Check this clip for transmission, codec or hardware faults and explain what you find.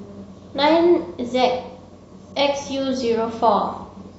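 One fault: an adaptive stream at a lower bitrate, from 1.41 s to the end at 4.19 s. The player switched to a cheaper rendition mid-play, consistent with AAC dropping from about 96 to 32 kbit/s. The speech abruptly gains a coarse, swirly codec texture, with no gap at the switch.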